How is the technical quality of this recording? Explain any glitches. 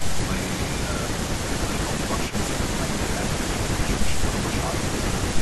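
The quality takes a few hits from echo-control problems, with one brief echo at the very start and two spots where the speech gets pulled down.

Echo leak, from 0.00 to 0.04 s: right at the top there's a faint delayed copy of the speech, trailing by about 316 ms and sitting around 15 dB under the main signal. It's only a 40 ms scrap, so it reads as a ghostly flicker rather than a proper repeat. The likely cause is a far end on speakerphone whose echo canceller didn't fully scrub what its microphone caught and sent it back.

Speech suppressed in double talk, at 1.88 to 2.53 s and 4.11 to 4.24 s: in both spots the speech briefly ducks. In the first window, about 200 ms in total gets hit, dropping by up to roughly 10 dB. The second is lighter, around 50 ms with a dip of about 5 dB. That pattern likely comes from an echo canceller that couldn't separate the talker from loudspeaker echo while both sides were talking and turned everything down.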